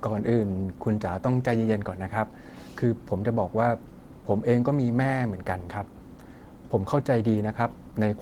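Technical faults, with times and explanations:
No technical faults can be heard in this speech.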